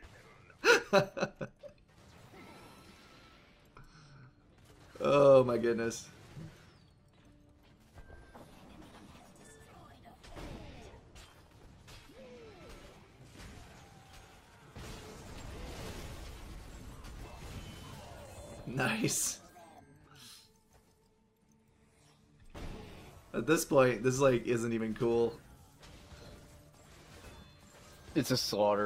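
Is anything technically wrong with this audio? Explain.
Yes. There is clock drift between sender and receiver. The sender's clock runs roughly 4 percent fast, so the receiver's buffer keeps overfilling.

Repeated timing corrections follow from 0.07 to 25.15 s, and again from 28.17 s to the end. The receiver trims small pieces to catch up. The sound plays about 4 percent fast, then 8 percent. It carries slight, uneven hiccups.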